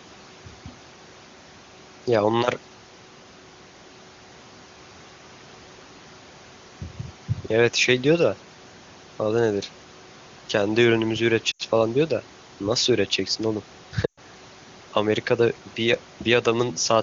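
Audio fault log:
11.51–11.62 s and 14.06–14.20 s, lost AMR speech frames: about 80 ms, then 120 ms, fitting runs of four and six 20 ms frames, where the wideband decoder repeated its last pitch and vocal tract settings with falling gain. The sound drops to near silence within two frames, then returns briefly weak or rough.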